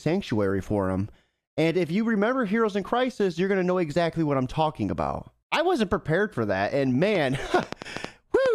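Likely interference or a faulty connection drops a train of clicks into this speech from 7.15 to 8.47 s: about seven uneven pops, roughly 5.4 per second, well above the voice.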